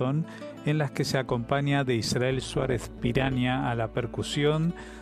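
From about 2.40 to 3.37 s there's overlap-add ripple. The sound was chopped into windowed frames and stitched back together, but the overlap between frames doesn't add up to a steady gain, so the level pumps once per frame. Here that swing is about 11 dB deep and runs at around 150 Hz, fast enough that it comes across as a metallic buzz with extra tones around each note, sitting on top of the sound for that stretch.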